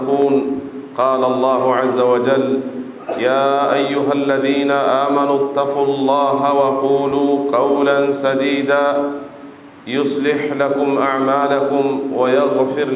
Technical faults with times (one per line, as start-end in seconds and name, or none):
none